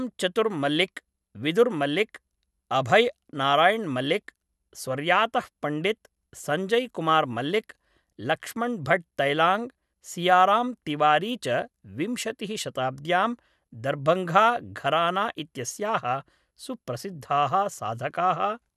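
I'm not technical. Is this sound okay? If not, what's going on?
Yes, nothing stood out as a problem when listening to this speech recording.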